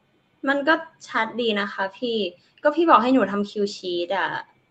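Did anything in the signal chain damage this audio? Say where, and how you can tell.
No, nothing in the signal chain damaged this audio.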